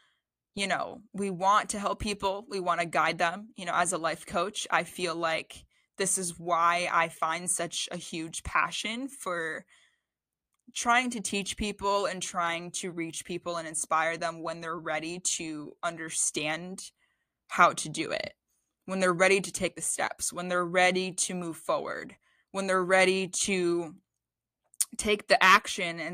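No audible technical faults occur anywhere in the speech.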